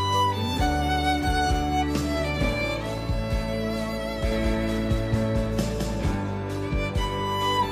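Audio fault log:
4.31–6.15 s: doubled audio track. A second, full-band copy of the sound runs about 200 ms behind the original at roughly the same level, so every event is heard twice in quick succession. The trailing copy carries no decay or room colouring, which sets it apart from a natural echo, and it cuts in and out abruptly at the range edges. The likely cause is the same signal reaching the mix twice through a slower second capture path.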